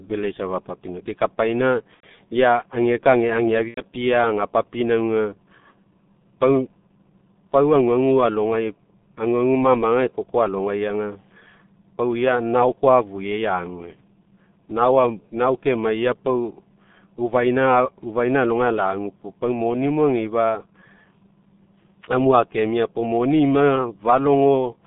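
G.723.1 codec damage runs through the whole recording. The sound is confined to roughly 150 Hz to 3.6 kHz, and the codec's slowly updated voice model smears it heavily, leaving speech muffled and hoarse with blurred consonants. The coarseness fits the codec's higher-rate mode near 6.3 kbit/s.

VoIP packet loss concealed by the speech codec occurs from 1.94 to 2.06 s and again from 3.68 to 3.81 s. Each gap is about 90 ms, consistent with three lost 30 ms frames. The decoder extends its last pitch and filter at falling gain, producing a brief fading smear, and the voice stays weak or distorted for tens of milliseconds after packets return.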